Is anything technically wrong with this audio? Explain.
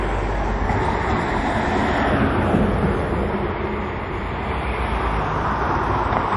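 Yes. The whole clip shows plainly audible codec damage, likely from MP3 compression. Nothing is present above 11.3 kHz, so the top end sounds dull and clipped off. The remaining sound has a watery, swirling texture, and sharp onsets are smeared. This fits a low bitrate, around 48 kbps. With so few bits, the encoder cuts the treble at a fixed point. It also discards weak frequency detail, which flickers in and out from frame to frame and causes the swirl.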